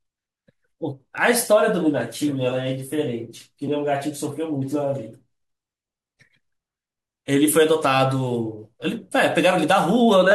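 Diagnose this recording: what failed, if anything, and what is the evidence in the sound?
Nothing in this recording points to a failure at any stage of the chain. The speech runs without any audible break, disturbance or sudden change that would mark a fault.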